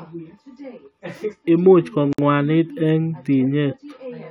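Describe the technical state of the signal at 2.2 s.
From 2.13 to 2.18 s there's a gap at a join of encoded pieces. Untrimmed encoder padding leaves a 56 ms hole with smeared edges that cuts the speech, which then carries on from where it stopped.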